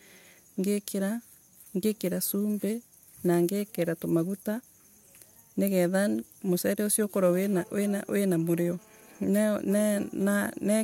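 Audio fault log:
7.53–9.17 s, GSM phone buzz: the audio circuitry rectifies a nearby 2G phone's data bursts, adding a harsh 217 Hz harmonic-rich rasp about 32 dB below the speech.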